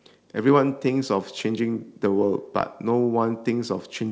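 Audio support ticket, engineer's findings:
Nothing stood out on listening to the speech, which comes through the call path with no content above 8 kHz, as expected for a wideband call codec such as G.722.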